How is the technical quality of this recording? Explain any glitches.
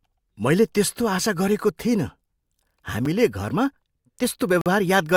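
Two brief dropouts interrupt the speech.

At 3.05 s, a block of digital silence: a 5.8 ms run of zeros, which fits a 256-sample buffer left unfilled in time, heard as a sharp tick.

From 4.61 to 4.66 s, a gap between stream segments: mismatched segment timestamps leave a 45 ms hole, filled with silence, heard as a hard-edged cut without lost audio.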